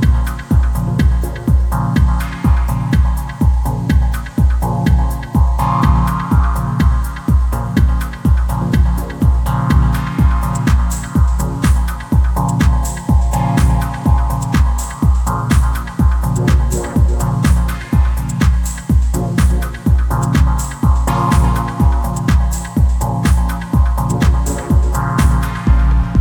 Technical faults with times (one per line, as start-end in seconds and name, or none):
none